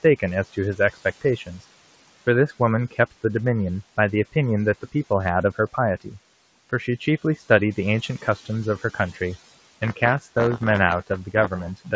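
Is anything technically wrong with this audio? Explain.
Yes, three faults are audible.

Noise suppressor artifacts run through the whole clip. The suppressor judges, frame by frame, which frequency bands hold steady noise and pulls them down by about 16 dB. The background therefore sinks in the pauses and swells back under the speech. That pumping tracks the speech, which tells it apart from a steady room hiss. The room noise itself sits about 20 dB below the speech.

Speech cut by the noise suppressor occurs at 0.03–1.61 s, 2.48–3.13 s, 3.97–6.14 s, 6.7–9.18 s, 9.96–10.28 s and 11.07–11.92 s. In each stretch the suppressor mistook some soft speech for noise and turned it down with the background, by about 10 to 16 dB at worst. In total about 0.1 to 0.3 s per stretch is affected. Quiet consonants and word endings sound swallowed rather than clipped or dropped outright. The sound is dimmed, not silenced, and that separates it from packet loss.

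Buffer tearing starts at 9.80 s and lasts to the end. Writer and reader of the playback ring buffer have drifted so that they cross inside each period. Roughly 4% of every buffer replays audio from about 20 ms earlier, with hard joins at both edges. The result is a robotic 93.8 Hz buzz, which fits a 512-sample buffer. It sounds only while there is signal, unlike steady hum. The G.722 call path at 64 kbps has no content above 8 kHz.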